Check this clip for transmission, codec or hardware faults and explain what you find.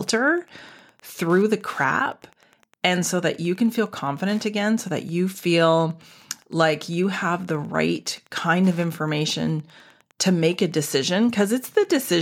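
One hardware fault runs through the whole speech recording: Wi-Fi interference. A nearby Wi-Fi radio's beacon, every 102.4 ms, is rectified by the audio circuit, giving a steady ticking about ten times a second, roughly 35 dB below the speech. A spectrogram shows evenly spaced thin vertical lines.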